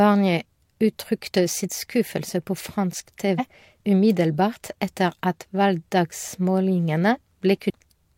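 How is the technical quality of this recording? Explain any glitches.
Two brief glitches from damaged data in a compressed stream break into this speech recording, at 3.35 to 3.40 s and 7.66 to 7.71 s, each about 50 ms long. Corrupted bytes leave the decoder unable to parse those frames, so it loses sync and hunts for the next valid frame header. Each event is a short disruption in the speech.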